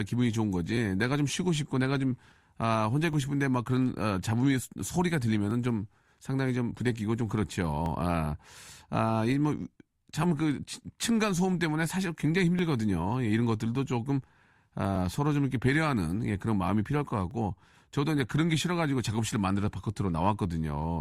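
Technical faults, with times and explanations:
0.77–19.68 s, clock drift buffer slips: two devices, likely on separate clocks about 500 ppm apart, let the buffer between them drift until a block of roughly 50 samples is dropped or repeated. The result is a short click every 2.36 s in the speech, about ten in all.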